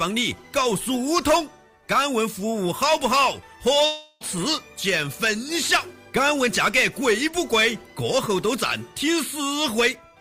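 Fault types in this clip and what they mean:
long network dropout: from 3.85 to 4.23 s the last sound stretches into a fading buzz or hiss, then returns with 0.36 s lost, likely from a stalled network stream.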